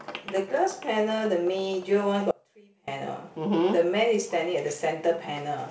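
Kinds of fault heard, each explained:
Audio dropout to a faint residue: the speech cuts out abruptly at 2.31 s and returns just as suddenly at 2.88 s, a gap of about 0.57 s. Instead of silence, the gap holds only a faint sound, roughly 30 dB below the normal signal level. This is likely a momentary loss of the wanted signal while the path after the break stayed live. The hard edges set it apart from a natural pause or fade.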